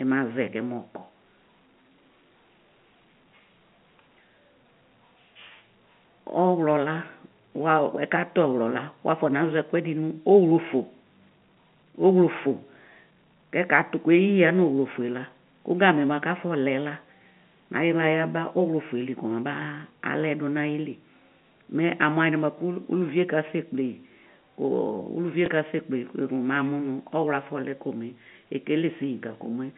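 At 25.46 to 25.48 s a brief blip breaks the speech: packet loss with last packet repeated, where one lost 20 ms packet was filled by replaying the previous one.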